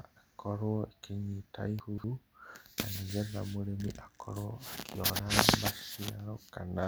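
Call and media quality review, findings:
Chunks out of order, 1.80–2.04 s: a 60 ms chunk lands three chunks late and plays after its successors, pointing to the jitter buffer or playout queue not reordering. Speech briefly jumbles, with three hard joins. Chunks out of order, 5.04–5.16 s: the same failure with a 60 ms chunk one position late. A shorter swapped pair is heard as a quick jumble. No audio missing.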